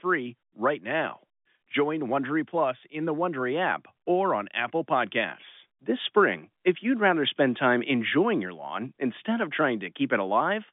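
No technical faults are audible.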